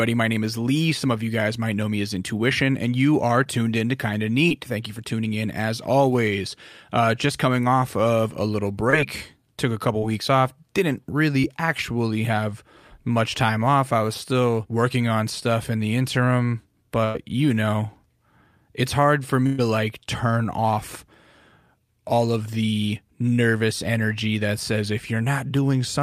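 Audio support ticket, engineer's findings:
Short concealed packet loss at 3.43, 4.49, 8.90, 9.99 and 11.40 s. Brief smears or wobbles in the speech, each about 20 ms of audio replaced by concealment, about 40 ms at 9.99 s. Receiver-side jitter buffer and decoder: late or lost packets were patched by extending the preceding sound, then crossfaded back. Distinct from the bursts below: too short for a held tone or a fade, so only a blip.

Burst of packet loss at 17.04 s (about 100 ms) and 19.46 s (about 120 ms). Network loss across consecutive packets, concealed in the decoder: the last sound is stretched into a held buzz or hiss that decays, then speech resumes with that stretch of content gone. Told apart from the short losses by its audible sustained fade and the skipped speech. No dropout to silence at 19.46 s; concealment covers the whole gap.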